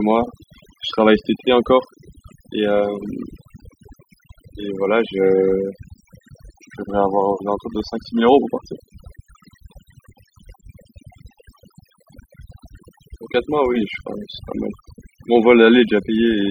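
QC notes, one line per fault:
Throughout: overdone noise removal. The noise reduction was pushed too hard on a noisy recording. Each frequency band that sits close to the tool's noise estimate gets pulled far down or shut off. Quiet parts of the speech fall below that line and vanish with the noise. Between phrases the background drops to near silence, dotted with twinkling specks where stray bands flicker on and off.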